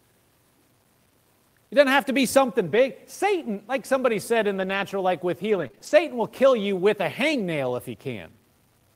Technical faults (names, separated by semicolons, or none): low bit depth without dither; lost packet rebuilt from error correction; scattered short gaps